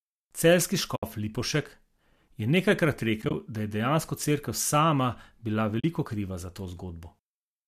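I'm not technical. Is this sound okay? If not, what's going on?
No, there are three short dropouts. This is AAC frame loss with muting: small chunks of the compressed audio went missing in transit, and the player filled each gap with silence, fading out and back in so you hear a soft hole. The first is a clean gap of about 70 ms at 0.96 to 1.03 s. The second, around 3.22 to 3.34 s, is a stutter of tiny gaps, each up to about 20 ms. The last, at 5.80 to 5.84 s, is about 40 ms just before "kriva za". The sound likely went through a low-delay AAC codec, the kind used for video calls.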